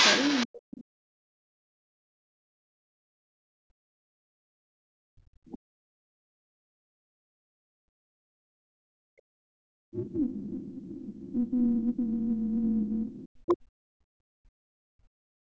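Speech throughout, with a second voice intruding from 0.00 to 0.46 s at nearly the main speech's level, and more faintly from 9.96 to 11.33 s and 12.85 to 13.54 s, which is likely the other side's voice leaking through from a loudspeaker the echo canceller did not fully remove. The main speech dips by around 40 dB or breaks into pieces from 0.46 to 1.81 s, 2.49 to 10.66 s and 11.33 to 15.39 s, most likely speech suppressed in double talk, with the canceller turning down both sides while they overlap. At 2.09 to 2.21 s the room sound briefly drops out by about 40 dB, background gated by the echo canceller clamping the microphone while the loudspeaker plays.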